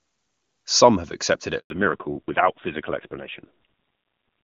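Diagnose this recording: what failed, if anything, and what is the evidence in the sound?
A network-side handover gap is the first failure. At 1.58 s the speech fades out over a few tens of milliseconds and there's dead silence until 1.70 s, about 120 ms. That's the call being passed from one network to another with no speech frames arriving during the switch. The decoder has nothing to play, so whatever was said in that window is simply gone.

Right as audio returns at 1.70 s there's a fallback to narrowband, and it lasts to the end of the clip. Before the gap the speech has HD Voice bandwidth with clean AMR-WB coding. After it, there's nothing above 4 kHz, so it sounds duller, and there's a rough, raspy edge. That's the new link negotiating an older narrowband codec, and the roughness points to a low AMR-NB rate, around 5.9 kbit/s.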